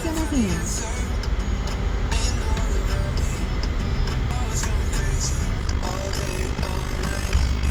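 Damaged data in a compressed stream appears at 4.31 s. Corrupted bytes leave the decoder unable to read the frames there, so it loses sync and hunts for the next valid frame header. The result is a short glitch in the sound.

Overlap-add ripple runs from 5.60 s to the end. The audio was split into windowed frames and rejoined with an overlap that doesn't sum to a steady gain, so the level swings by about 11 dB around fifty times a second. This produces a rough, buzzy flutter.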